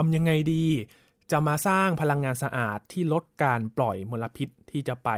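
Nothing's wrong with this one as far as the ear can tell: the speech runs along without any technical hiccup worth pointing to.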